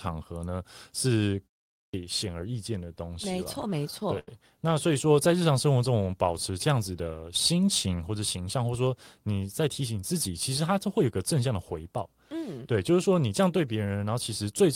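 At 1.7 s, right after a short pause of about 0.3 s, there's a clipped start after a pause: the output device seems to have dozed off in the quiet, and roughly the first quarter second of speech, about 235 ms, gets swallowed before it wakes, so the speech jumps in abruptly.

From 2.85 to 4.29 s you get repeated stalls, a stutter: packets kept arriving late, the jitter buffer ran dry 14 times, and the receiver stretched the last bit of sound to cover about 207 ms in total, with the longest gap 81 ms. Nothing's lost, but it drags and judders.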